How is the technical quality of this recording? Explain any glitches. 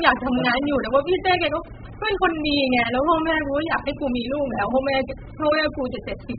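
Pretty rough, honestly. The speech is heavily degraded from start to finish. It sounds like AAC compression, likely AAC-LC pushed to a very low bitrate, around 8 kbps. Nothing comes through above 4.9 kHz, so it's dull, and starving the encoder like that leaves smeared, warbly, fizzy artefacts on sustained sounds and sibilants throughout.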